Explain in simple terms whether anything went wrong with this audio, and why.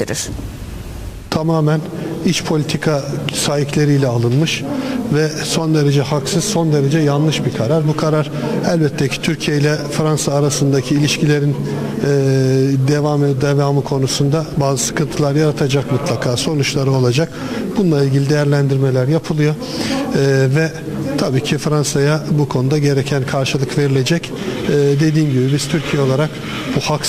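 Nothing stood out as going wrong when listening to this audio, so there is no fault to explain.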